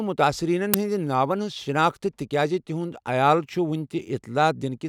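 A block of playback memory was sent out before any audio had been written into it, an uninitialised buffer, so whatever stale data sat there was read as samples in this speech clip. At 0.74 s that garbage comes through as a very short, loud crack lasting about 5.3 ms, a length which fits a single 256-sample buffer. It cuts in abruptly and then the signal carries on.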